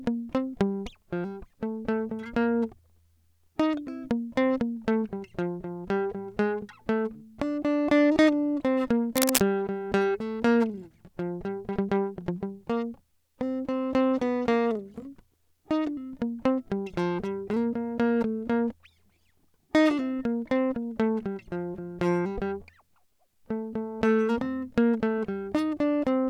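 At 9.16 to 9.41 s, a dense, uneven burst of scratching and rustling rides over the music for about a quarter of a second. It is roughly as loud as the music itself. This is cable scratch noise. Its likely cause is a worn cable or connector being moved, so its contact resistance jumped about rapidly.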